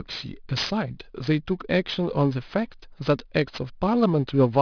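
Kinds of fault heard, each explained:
Aliasing: the speech was resampled from 24 kHz to 11 kHz unfiltered, so content above 5.5 kHz folds back, roughly 15 dB down, making sibilants gritty; spectrograms show mirrored energy running hard to 5.5 kHz.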